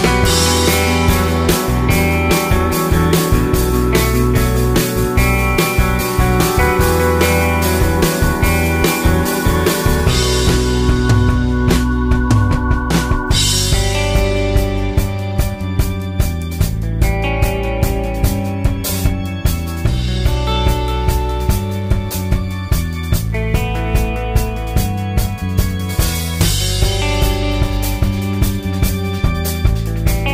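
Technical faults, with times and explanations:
19.48 to 24.09 s, mains buzz: a raspy 60 Hz buzz comes in for about four and a half seconds, sitting roughly 35 dB under the sound. Sharp switching spikes, twice per mains cycle, stack up harmonics well into the kilohertz range, hence the edge.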